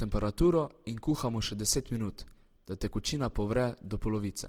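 From start to finish the speech sounds grainy and rough, with a noisy, sandpapery texture over the voiced sounds, yet the top end stays open, extending to about 20.3 kHz. That points to Opus compression, likely in its music-oriented CELT mode at a low rate near 16 kbps. When bits run short, empty bands are filled with folded or noise content instead of being left as holes. That keeps the watery swirl of MP3 away, and the full bandwidth rules out the muffled, hoarse speech mode.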